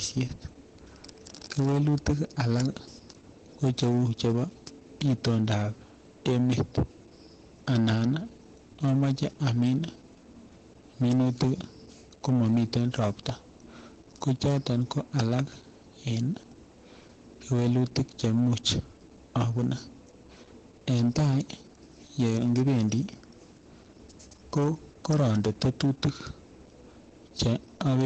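From the first second to the end, some stage in the chain is being driven about 16 dB past the level it can pass, so every peak is cut off flat. Because the overload is that large, a noticeable share of the waveform, several percent of it, sits pinned at the ceiling. This hard clipping shows up as a harsh, buzzing fuzz on every stressed syllable and louder stretch of speech rather than as occasional crackle, with gritty upper harmonics smeared across the top of the band.

Running alongside it for the whole clip is Opus voice compression in its SILK speech mode. The content stops sharply around 8.6 kHz, a wideband setting, and the coarse treatment of the voice points to a low rate in the region of 12 kbps with 20 ms frames. The encoder models the voice with linear prediction and has too few bits to describe the excitation finely, so the speech sounds muffled, hoarse and faintly robotic.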